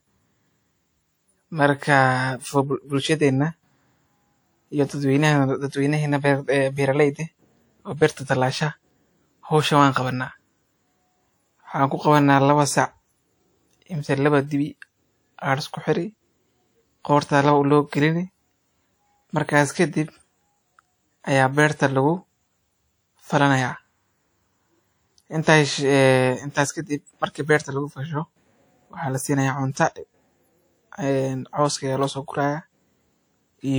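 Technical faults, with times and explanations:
Throughout, low-bitrate audio saved at a high bitrate: the speech keeps the artefacts of the earlier lossy coding even though it sits in a generous MP3 file, with content reaching about 20.1 kHz. The likely cause is an earlier low-bitrate pass, consistent with something like a 48 kbit/s WMA stage, whose losses the later high-bitrate encode simply preserved. Unlike a plain low-bitrate encode, the file's bitrate does not match how degraded it sounds.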